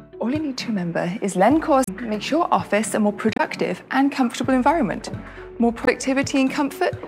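Three short glitches break through at 1.84 to 1.89 s, 3.33 to 3.40 s and 5.84 to 5.89 s, each well under a tenth of a second. They come from damaged data in the compressed stream: corrupted bytes garble those frames, so the decoder misreads them and loses sync until it finds the next frame header.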